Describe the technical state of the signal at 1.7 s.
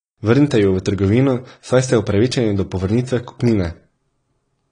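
At 1.7 s the speech carries AAC compression damage, present across the whole clip rather than at that moment alone. Nothing sounds above 10.1 kHz, and the sound is dull and smeared, with a warbling, fizzy texture on sustained sounds and sibilants, likely from AAC-LC coding at a low bitrate, which fits about 32 kbps. On a spectrogram the energy stops at a hard ceiling near 10.1 kHz.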